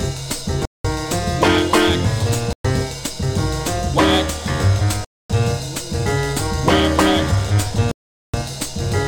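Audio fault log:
0.65 to 8.34 s, Bluetooth stall: the sound drops to dead silence four times, at 0.65 s for 0.19 s, at 2.53 s for 0.12 s, at 5.05 s for 0.25 s and at 7.91 s for 0.42 s, and after each gap it resumes as if interrupted. The likely cause is radio interference delaying packets, so the headphones' buffer emptied and playback halted until the retransmitted audio arrived.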